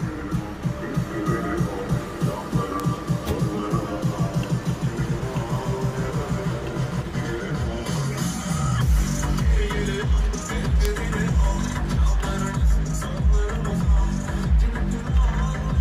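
Bit error spikes at 2.80 s and 10.85 s: two adjacent samples each jump by a power of two, then snap back, peaking at about -11 dBFS and about -5 dBFS. Each is one sharp, broadband tick unrelated to the surrounding sound, the second one louder.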